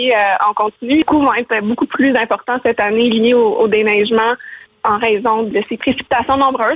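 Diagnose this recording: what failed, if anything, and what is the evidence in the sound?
Skip ahead at 1.02 s, in the network and jitter buffer: about three-quarters of a second of audio vanishes, and the two sides join with no silent gap. That seamless splice sets it apart from a dropout.

Jitter buffer speed-up from 1.12 to 2.45 s: the audio runs about 4% fast at unchanged pitch, as pitch-period trimming drains excess buffered delay. A resampling fault would raise the pitch instead. The G.711 band limit stays at 4 kHz throughout.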